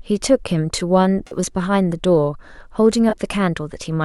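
At 1.27 s there's a corrupt frame concealed, lasting until 1.36 s, about a tenth of a second. The decoder caught damaged bits in the AAC stream and papered over them itself, muting or smearing the last good spectrum. The length fits about two frames. A shorter one follows at 3.10 to 3.13 s.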